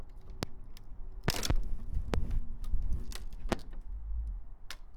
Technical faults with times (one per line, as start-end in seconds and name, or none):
0.43-0.45 loud pop
1.28-1.53 loud pop
2.14-2.16 loud pop
3.52-3.55 loud pop